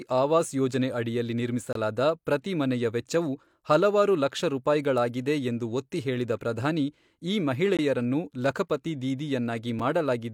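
Brief hard-edged silent holes cut into the speech at 1.73–1.75 s after "ಆವಾಸ್ ಯೋಜನೆ ಅಡಿಯಲ್ಲಿ", 7.77–7.79 s after "ಎಂದು ಒತ್ತಿಹೇಳಿದ ಪ್ರಧಾನಿ ಈ", and 9.79 s after "ಲಖಪತಿ ದೀದಿ". These are gaps between stream segments: the 2-second segments' timestamps don't meet, so the player fills each gap with silence, and no audio is lost.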